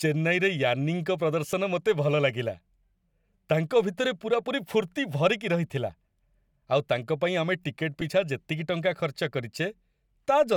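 A speech recording with two very brief glitches, at 1.52 s and 8.01 s, where the sound turns for an instant into a noisy smear in place of clean detail. These are lost LE Audio frames: each gap lasts about 7.5 ms, which fits a single dropped Bluetooth LE Audio frame. The LC3 decoder filled each hole by repeating the last spectrum with scrambled phase, producing that brief hiss-like blur.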